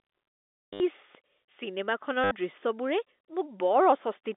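From 0.73 to 0.80 s, packet loss with last packet repeated replaces 70 ms of speech with a looped fragment. The stutter buzzes at about 100 Hz, which points to 10 ms packets. Unlike a plain dropout, the gap is filled rather than silent.

At 1.15 s a DC step shifts the waveform's zero line. It is heard as a single low thump that fades away as a 20 Hz high-pass pulls the offset back to zero. The speech carries on unbroken, which separates this from a splice click.

The same repeated-packet stutter returns from 2.24 to 2.31 s, again 70 ms of buzzing repetition. It stays inside the 250 Hz to 3.6 kHz band of the G.711 mu-law telephone line.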